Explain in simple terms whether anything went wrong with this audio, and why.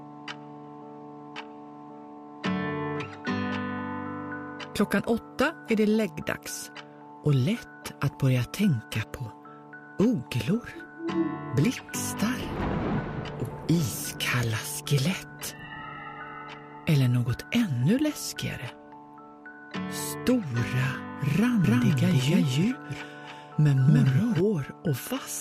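Near the end, from 21.64 to 24.40 s, there's a doubled audio track: a second, equally loud copy of the sound trails the original by roughly a third of a second, snapping in and out abruptly. Likely cause: the audio got captured twice through a slower second path.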